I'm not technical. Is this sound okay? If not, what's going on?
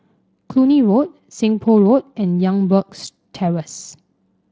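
Yes, this speech sounds fine; it has been through Speex, a voice codec once common in internet calls and game chat, and nothing in it has gone wrong.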